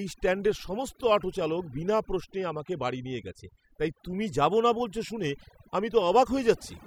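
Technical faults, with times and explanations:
Throughout, overdone noise removal: a noise reduction stage set too aggressively keeps cutting individual frequency bands whenever they sit near its noise estimate, taking the quieter parts of the speech with them, so gaps fall to near silence flecked with twinkling specks.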